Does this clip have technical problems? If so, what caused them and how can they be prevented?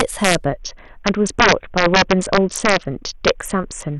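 Yes. Integer overflow runs throughout: the signal is driven about 6 dB past the largest integer the path can hold, and instead of being limited, those peaks wrap to the opposite sign. The loudest moments of the speech, a small fraction of the samples, snap into violent cracks far harsher than clipping. To prevent it, use saturating arithmetic or a limiter before the integer stage, and leave enough headroom.

A Bluetooth SBC bit pool drop follows from 0.45 s to 3.98 s. The link appears congested, so the encoder cut its bit budget sharply, to a level that fits a bit pool near 6 and roughly 60 kbps. The upper sub-bands lose their bits, so the treble goes dull and gritty quantisation noise rises over the rest. To prevent it, reduce radio congestion, keep the devices close, or use a codec and link setting that holds a higher bit pool.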